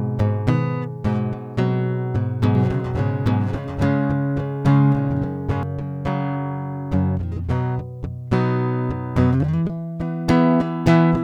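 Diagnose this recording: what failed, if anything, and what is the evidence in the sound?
A doubled audio track runs from 2.55 to 5.63 s: the music is heard twice, with a second full-band copy trailing by roughly 0.7 s at about the same loudness. The copy has no decay or room colour, and it cuts in and out abruptly at those times. On a spectrogram the whole pattern repeats, shifted about 0.7 s later; the waveform shows overlapping, equal-height transients. The likely cause is a second, slower capture path or an edit leaving two offset copies mixed together.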